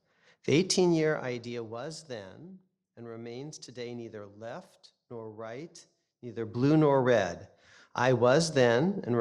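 No technical faults are audible.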